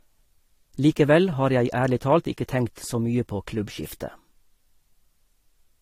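From start to finish the speech has no content above 16.7 kHz, with smeared, swirly codec artefacts of two different characters layered together. That mix is likely transcoding between lossy codecs, consistent with roughly 48 kbit/s AAC-LC re-encoded to Vorbis at around 45 kbit/s.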